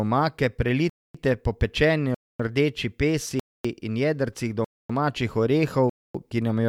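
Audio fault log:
0.90–1.15, 2.15–2.40, 3.40–3.65, 4.65–4.90 and 5.90–6.15 s: gap between chunks. After each 1 s chunk of speech comes 250 ms of hard-edged silence, the third just before "in jedrcih domačih". The speech resumes intact, so the silence is inserted at each join and no speech is lost.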